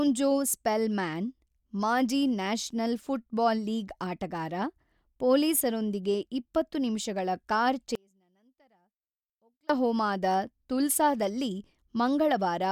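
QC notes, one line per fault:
7.95–9.69 s, audio dropout to a faint residue: the speech cuts out abruptly and the following 1.74 s holds only a faint leak of the signal, roughly 35 dB below its normal level, before returning just as suddenly. Because nothing fades and the path stays live rather than going to digital silence, this is likely a momentary loss of the wanted feed upstream while the rest of the chain kept passing sound.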